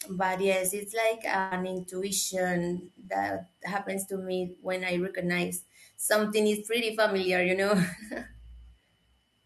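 At 1.39 s to 1.54 s, a burst of packet loss leaves about 120 ms of speech missing. The receiver stretches the last sound across roughly 115 ms, fading it as a held buzz or hiss. Unlike a plain dropout, it never goes silent; the speech then jumps ahead.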